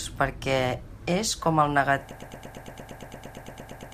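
From 2.11 s to the end, a 115 ms fragment repeats sixteen times, a broken-record loop, likely a stalled stream resending its last piece.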